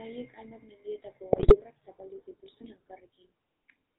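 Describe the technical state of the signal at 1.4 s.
GSM bit errors run from 1.32 to 1.56 s, just after "hainbat mendietako" and before "zapaldu zituzten". Corrupted filter, pitch and gain values make the sound squawk, pop and gargle. Underneath, the GSM full-rate codec throughout imposes a buzzy, gravelly roughness and cuts everything above 4 kHz, at its 13 kbps rate.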